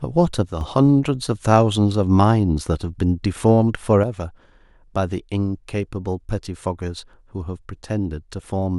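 The speech drops abruptly by about 6 dB from 0.46 to 0.61 s and again from 4.04 s to the end. That's likely one channel drops out before the mono fold-down.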